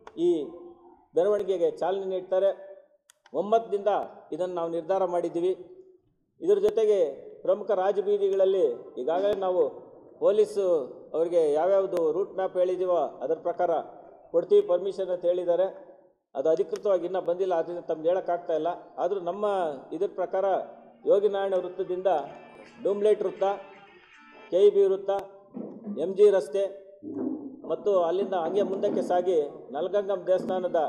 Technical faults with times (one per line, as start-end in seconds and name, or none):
1.39-30.49 clock drift buffer slips